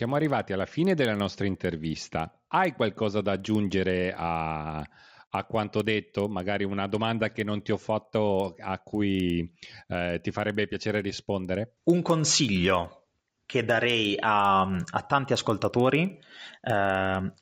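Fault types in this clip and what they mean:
Resampler restarted on every block: the 16 kHz to 48 kHz conversion runs afresh on each 50 ms block, so every block edge is computed against missing neighbours and picks up a small error. Throughout the speech this yields regular ticks at 20 Hz, heard only while sound is present.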